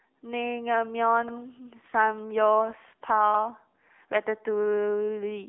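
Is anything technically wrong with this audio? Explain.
Yes, there are two problems. The whole clip has gone through the AMR narrowband mobile codec, and there's a stutter from overlapping chunks near the start.

The codec damage runs the full length and is plainly audible. The speech sits in a narrow line band of roughly 200 Hz to 3.6 kHz, with nothing above 3.6 kHz, so it sounds muffled and phone-like. AMR-NB rebuilds speech from a vocal-tract model excited by a handful of pulses per subframe. The buzzy, synthetic edge fits a mode of around 7.95 kbps, where there just aren't enough bits to carry much natural detail.

The overlapping chunks show up at 1.28 to 1.35 s. Whatever processed this audio worked in chunks of about 2.0 s, and the next chunk began before the previous one finished. That means about 64 ms of audio gets played twice at the join. You hear it as a quick stutter or click, a little hiccup where the same sliver of speech repeats before things carry on.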